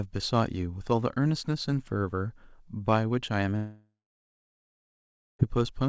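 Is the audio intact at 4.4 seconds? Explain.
No. At 4.4 s the sound sits inside a gap from 3.56 s to 5.41 s, most likely a long network dropout in the call path. When packets stopped, the receiver stretched the last sound into a fading buzz for a few tenths of a second, then left about 1.4 s of silence. By 4.4 s only silence remains, and when the audio resumes near 5.41 s the lost stretch is simply skipped.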